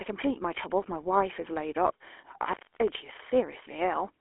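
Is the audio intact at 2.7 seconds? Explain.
No. An intermittent contact disturbs the sound from 2.45 to 2.88 s. A loose connection breaks for about 264 ms, and the audio drops out, with crackle at both edges. The waveform shows a near-flat gap bounded by sharp spikes. On the spectrogram it appears as a dark band with vertical clicks at each end.

The GSM full-rate codec also colours this moment, giving the sound a buzzy, gravelly roughness consistent with a 13 kbps coder. Its regular pulse excitation and telephone band of 300 Hz to 3.4 kHz leave the spectrogram empty above 3.7 kHz, with coarse, striated harmonics below.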